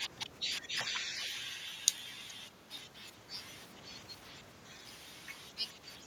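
At 1.21 to 1.25 s and again at 2.28 to 2.33 s, brief echo leak: a faint copy of the speech returns 416 ms late, the second scrap louder, likely loudspeaker sound that a far-end echo canceller missed. Its long, distinct delay separates it from room reverberation.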